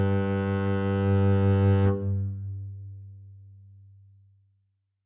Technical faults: none

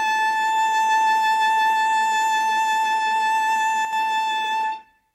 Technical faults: one channel drops out

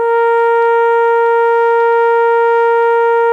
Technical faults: none

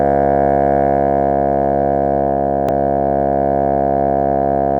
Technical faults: damaged data in a compressed stream

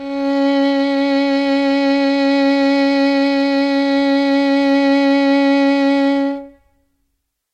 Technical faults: none

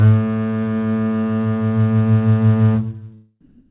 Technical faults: comfort noise in place of the background

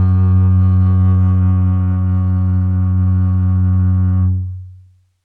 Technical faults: imaging from linear upsampling

